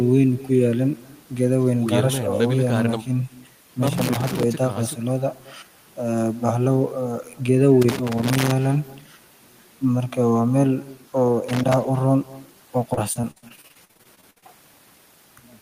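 From start to finish, every phrase is trailed by a faint, thin copy about a fifth of a second later, roughly 21 dB below the direct sound. This is echo with no canceller: the far end's loudspeaker feeds its microphone, and nothing removes the returning signal.

Irregular bursts of scratchy crackle break in at 3.87 to 4.43 s, 7.82 to 8.51 s and 11.49 to 11.74 s. This loose connector crackle comes from a worn or dirty contact making and breaking, chopping the signal.

From 12.93 to 14.44 s the sound turns choppy, with pieces repeatedly missing. This is repeated packet loss (robotic sound): gaps up to about 55 ms follow one another closely, each patched by extending the previous sound, so about a third of the stretch is filled-in audio.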